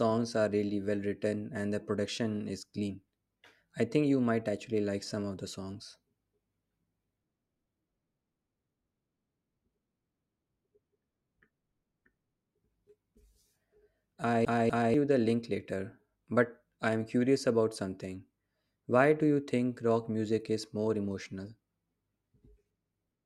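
From 14.45 to 14.94 s the speech hits a CD stuck on one turn: the laser jumps back, replaying a 245 ms loop twice with a brief mute at each jump.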